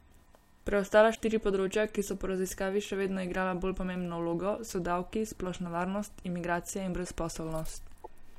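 At 1.14 to 1.21 s, just before "področja ki so po", and again at 8.03 to 8.07 s, the speech jumps ahead through a short glitch. The likely cause is a broken MP3 bit reservoir: after cut 26.1 ms frames, the next frames decode another frame's bytes.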